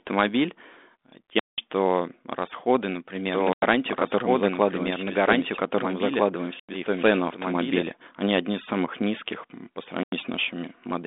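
This telephone speech passes through G.726 ADPCM at 32 kbit/s, with nothing above 3.8 kHz. The output buffer went unfilled four times, giving blocks of digital silence where the sound cuts out and back with no fade. The first, at 1.39 s, lasts about 186 ms, which fits an 8192-sample buffer. Those at 3.53 s, 6.60 s and 10.03 s (just after "из самых низких по") each last about 93 ms, which fits a 4096-sample buffer. From 3.34 s to 7.84 s, just before "они одни из самых", a doubled audio track runs, likely because a second, slower capture path or an edit held two copies out of step. A full-band copy sits roughly 1.5 s behind at about the same level, with no room colour, and it starts and stops abruptly.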